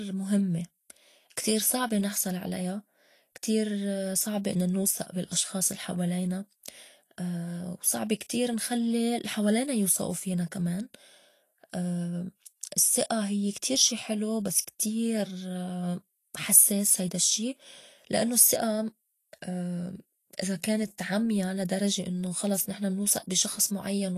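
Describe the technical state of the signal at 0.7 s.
Vorbis-style compression damage is present at 0.7 s, as it is across the whole speech clip. The likely cause is low-bitrate Vorbis coding, around 35 kbps by the sound, which removes everything above 14.2 kHz and quantises the upper band into grainy, hissy noise that roughens tones and softens attacks.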